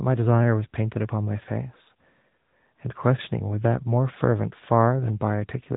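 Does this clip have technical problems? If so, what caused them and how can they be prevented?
Yes. Throughout the clip, the speech went through an AMR narrowband mobile codec, which samples at 8 kHz and rebuilds the voice from a vocal-tract model driven by sparse pulses. The damage fits AMR-NB's 10.2 kbps mode. Nothing above 3.8 kHz remains, leaving the voice muffled and plainly buzzy and synthetic. To prevent it, carry the audio over a wideband or higher-bitrate codec, or record it locally instead of through a mobile call path.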